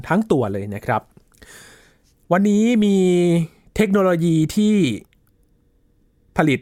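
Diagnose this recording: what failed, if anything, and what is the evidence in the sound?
Nothing in the recording points to a failure at any stage of the chain. No moment in the speech stands out as disturbed or altered.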